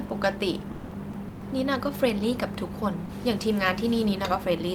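Four short chunks of the speech drop out and get swapped for steady noise or near silence: 0.71 to 0.91 s (about 200 ms), 1.11 to 1.13 s, 1.28 to 1.41 s, and 3.05 to 3.09 s. That's sound dropped by the voice detector, likely the sender's detector mistaking quieter bits of speech for background and pausing transmission, with comfort noise filling in. The pattern fits something like Opus DTX. There is also room noise, about 38 dB below the speech.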